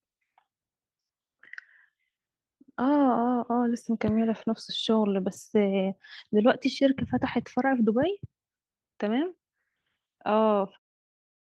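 Listening to this speech recording, nothing technically wrong stood out, and the level eases down gently toward the end as an editor would fade it.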